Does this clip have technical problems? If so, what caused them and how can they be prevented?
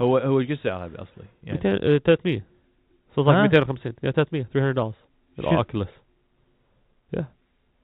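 No technical problems here.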